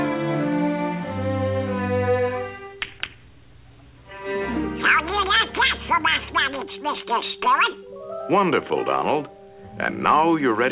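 No technical faults can be heard anywhere in this audio.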